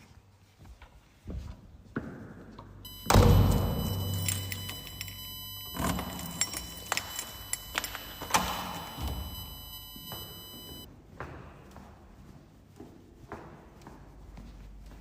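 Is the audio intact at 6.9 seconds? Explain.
No. At 6.9 seconds a USB whine sits over the sound. It runs from 2.85 to 10.85 seconds. The whine is a steady, fixed-pitch tone built on 1 kHz, with its strongest part at the 3 kHz harmonic. It is only about 10 dB below the sound, so it is clearly audible. It comes from the USB bus drawing current in 1 ms frames. That pulsing leaks into the audio through the power or ground.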